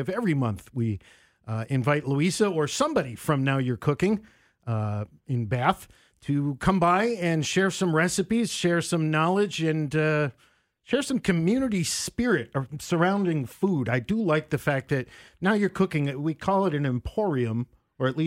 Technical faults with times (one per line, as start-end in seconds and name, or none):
none